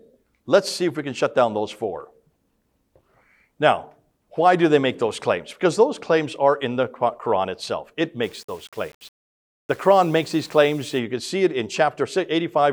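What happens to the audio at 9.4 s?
From 8.23 to 10.99 s the sound turns grainy, likely low bit depth without dither: rounding to roughly 8-bit steps leaves signal-following error about 30 dB down, seen as a raised broadband floor and stepped waveform.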